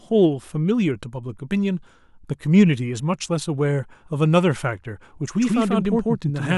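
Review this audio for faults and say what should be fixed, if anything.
A doubled audio track starts abruptly at 5.41 s and runs to the end. An equally loud copy trails about 150 ms behind, likely captured twice, and unlike echo it has no decay. Prevent it by making sure the source reaches the mix through only one capture or edit path.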